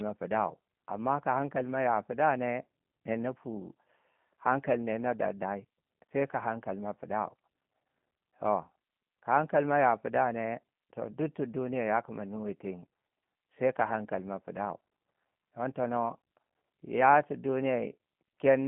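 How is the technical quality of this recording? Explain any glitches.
Technical quality is limited by one fault running through the whole recording: G.729 codec coding. The speech has been squeezed through a narrowband voice codec that rebuilds it from a vocal tract model, a pitch predictor and a few pulses per short frame, rather than keeping the waveform itself, which fits an 8 kbit/s link. Because so little is actually transmitted, the damage is plainly audible from start to finish. The sound is confined to roughly 150 Hz to 3.5 kHz, with nothing above 3.8 kHz, so it is thin and muffled. It also has a slightly rough, synthetic edge.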